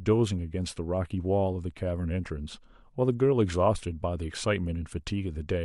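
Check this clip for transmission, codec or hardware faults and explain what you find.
Two brief faults turn up in the speech, at 2.56 s and 4.30 s. Each is a faint chirp, squeak, blip or burst of noise. This is a corrupt frame decoded: flipped bits in a single compressed frame sent energy to the wrong frequencies.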